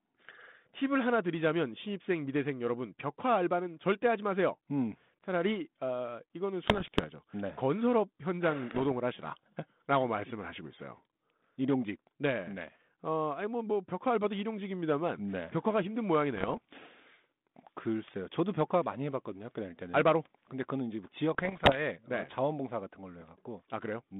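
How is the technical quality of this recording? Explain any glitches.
The recording has four short bursts of damage from bit errors on an ADPCM link, heard over narrowband telephone-style audio whose band stops near 3.6 kHz, which fits G.726 ADPCM at 32 kbit/s.

The bit errors on the ADPCM link occur at 6.66–7.05 s, 8.71–8.83 s, 16.35–16.60 s and 21.34–21.80 s, at an error rate of up to about one percent. Because an ADPCM decoder tracks a running prediction and step size, each flipped bit throws both off, so the error rings for several milliseconds. The result is pops and rough, gritty bursts with brief jumps in level. A waveform would show spikes and uneven amplitude steps at those times, and a spectrogram would show broadband vertical streaks across the speech band.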